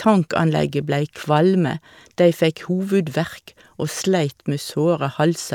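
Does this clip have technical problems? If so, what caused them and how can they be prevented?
No, no technical faults detected.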